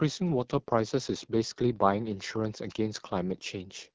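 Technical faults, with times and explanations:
Throughout, AMR wideband (HD Voice) codec: the speech sounds rough and raspy, pointing to one of its lowest rates, near 8.85 kbit/s, with noise-filled highs above 6.4 kHz.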